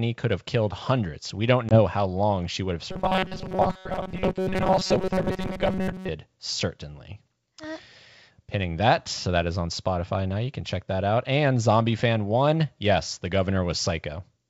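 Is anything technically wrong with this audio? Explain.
Yes. There are two faults in this speech clip.

From 1.69 to 1.81 s there is packet loss on an ADPCM call. A hard-edged gap of silence appears, which fits about two lost packets. ADPCM codes each sample as a change from a prediction. The decoder's predictor and step size therefore drift away from the sender's. When the speech resumes, it comes back slightly distorted. It settles over the next few tens of milliseconds.

From 2.9 to 6.09 s the speech takes on a robotic sound from repeated short buffers. A rigid, metallic buzz at 188 Hz sits on the speech. It still loosely follows the syllables. The likely cause is fresh audio arriving too rarely. The playback side then loops its last short block instead of waiting. A 188 Hz buzz points to a repeated block of about 5.3 ms. Roughly 70% of the real audio in that stretch seems to be skipped. 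The wideband telephone coding itself adds no more than a faint upper-band hiss.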